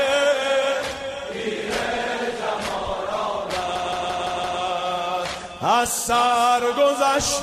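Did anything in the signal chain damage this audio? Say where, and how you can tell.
Yes. A system hang loop at the driver or buffer stage damages the audio from 3.76 to 4.61 s. The same 171 ms slice repeats exactly five times at about 5.9 Hz, giving a machine-gun stutter. Each loop is one full pass over the output ring buffer, which fits an 8192-sample buffer replayed while the host stalled. Virtually no audio goes missing. It differs from packet-loss concealment by its exact repeats with no fading or smoothing between them.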